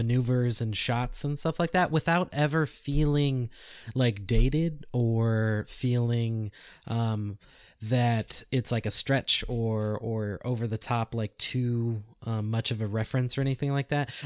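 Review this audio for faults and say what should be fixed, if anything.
Nothing here needs fixing, as the recording shows no technical faults anywhere along its course.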